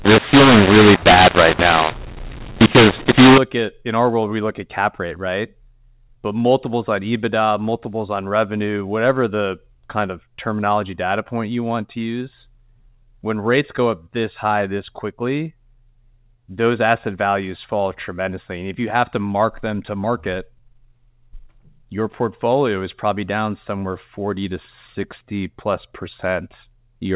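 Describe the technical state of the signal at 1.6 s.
At 1.6 s the audio sits inside a mu-law and A-law mix-up running from 0.0 to 3.38 s, ending just before "at in our world". Telephone samples coded as mu-law are decoded as A-law, scrambling levels, so the speech sounds harsh and distorted and pauses fill with noise. The waveform shows jagged, misproportioned peaks and a raised floor between them; the spectrogram shows a broadband noise haze below the 4 kHz ceiling.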